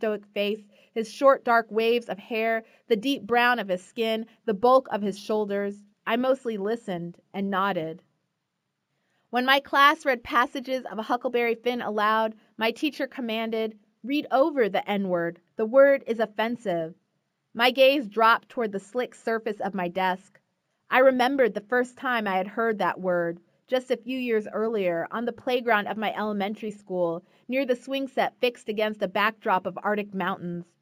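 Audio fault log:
Throughout, imaging from linear upsampling: the material appears to have been raised in rate by straight-line interpolation between samples, which fits a 16 kHz source brought up to 48 kHz. That interpolation is a poor low-pass filter, so the top of the original band is softened and a faint mirrored copy of the spectrum survives in the 8 kHz to 16 kHz region, roughly 35 dB below the signal, heard as a thin metallic shimmer on bright, high-frequency content.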